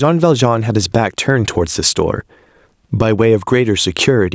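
From start to finish the speech shows gain pumping: the gain ducks by around 15 dB under each loud syllable, squashing the dynamics. The likely cause is excessive microphone gain driving a fast limiter. Unlike a noise gate, the level never cuts out but rises and falls. The call's microphone processing leaves nothing above 8 kHz.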